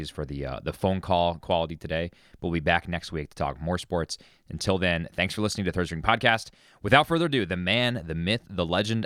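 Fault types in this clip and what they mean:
No technical faults can be heard in this speech recording. There is nothing to list for it here.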